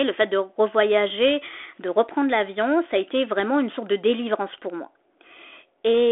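Nothing technically wrong can be heard in this speech recording. It has the narrow sound of a telephone line coded with G.726 ADPCM at 32 kbit/s, held to a 300 Hz to 3.5 kHz band with nothing above 3.8 kHz, and the codec leaves only a light mark on it.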